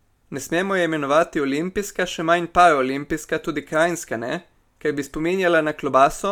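No technical faults are audible.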